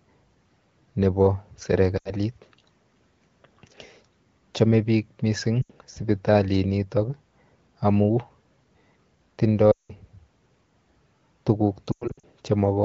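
Lost AMR speech frames break the wideband speech four times. At 1.97 to 2.11 s and 5.62 to 5.72 s, about 80 ms goes missing, which fits four 20 ms frames. The decoder repeats its last good settings with falling gain, so the sound drops to near silence. At 9.72 to 9.91 s the gap is 180 ms. The sound drops to near silence within two frames. From 11.92 to 12.24 s, 220 ms of losses scatter, with runs up to 100 ms, giving choppy dropouts.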